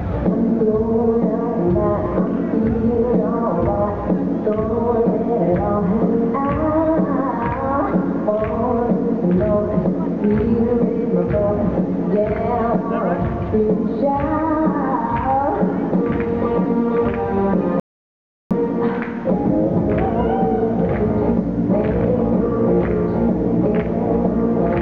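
An audio dropout to silence runs from 17.80 s to 18.51 s, a gap of about 0.71 s. The sound stops abruptly mid-flow and returns just as suddenly, and in between there is silence, with no room tone or background hiss at all. That total blankness likely means the input was briefly lost, through a disconnect or a momentary mute, while recording carried on writing silence. Whatever occurred during that stretch is missing.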